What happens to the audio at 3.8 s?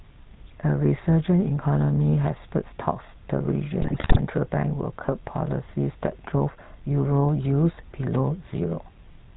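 From 3.82 to 4.19 s the speech breaks into squawks, pops and a gargling, bubbling texture, with sudden jumps in level. These are GSM bit errors: corrupted bits reached the decoder and scrambled the parameters it uses to rebuild each slice of sound. Wrong filter values twist the spectrum, and bad pitch or gain values make the level lurch. The damage spans roughly 0.37 s, which fits about 18 consecutive 20 ms frames corrupted on a weak link.

Under this burst, and across the whole clip, the speech has a buzzy, gravelly roughness and nothing above 4 kHz. That is the GSM full-rate codec, and its plainly audible damage points to the 13 kbps full-rate coder. It models the vocal tract as a filter and drives it with a sparse, regularly spaced pulse train that keeps only every third excitation sample. That crude excitation produces the rasp, and the narrow band cuts off the top end.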